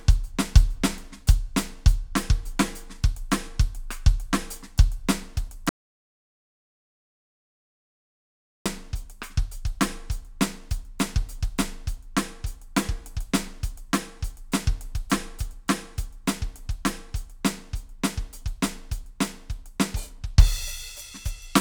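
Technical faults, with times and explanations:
5.69–8.66 s, audio dropout to silence: the music cuts off mid-phrase into about 3 s of total silence with no room tone, then resumes mid-flow. This is likely a lost input, with the recorder writing silence until the signal returned.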